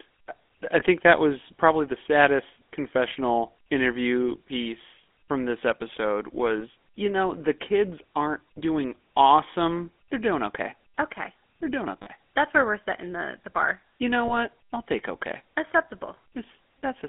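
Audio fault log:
throughout: GSM full-rate codec. The speech is confined to about 200 Hz to 3.5 kHz and rebuilt from a vocal-tract model driven by sparse pulses, giving a plainly buzzy, gravelly roughness that fits 13 kbps full-rate coding.
0.80–0.83 s, 6.60–6.63 s, 12.02–12.08 s and 14.28–14.37 s: lost GSM frames. Each gap is filled by repeating the last good frame, which is heard as a brief rough, metallic ring. These fall just before "that was probably the", between "piece from this episode" and "you know the kids", and just before "I'll take okay". The one at 12.02 s is the longest, spanning two frames.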